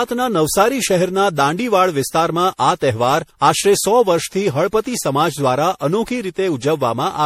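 Throughout, the speech sounds swirly, hollow and smeared, with nothing above 16.4 kHz. Likely generation loss: about seven re-encodes, fitting 64 kbit/s MP3.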